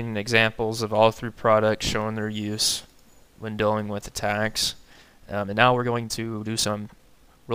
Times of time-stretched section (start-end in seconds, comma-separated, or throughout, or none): 4.88-7.55